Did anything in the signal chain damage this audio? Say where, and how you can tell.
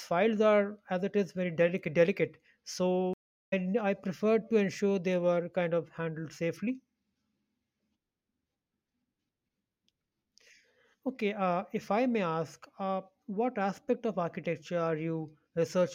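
Yes. At 3.14 s the speech cuts to silence for 386 ms, then resumes at "I preferred to ensure" with roughly a third of a second missing. This is a stream reconnect at the network stage: the connection dropped, and the player rejoined further along and restarted its decoder mid-stream.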